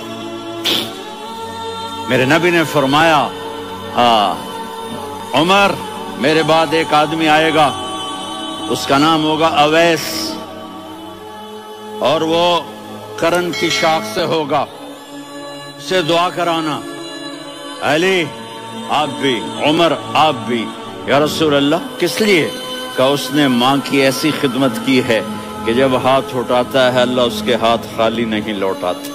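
From 0.22 s to 28.15 s, a short click or pop recurs every 2.79 s, about ten times in all. The spacing is very even. Each click marks a tiny jump in the waveform, where a block of roughly 70 samples goes missing or repeats. This pattern points to clock drift buffer slips, likely from two devices running on separate clocks. A steady interval like this fits a clock mismatch of around 500 ppm.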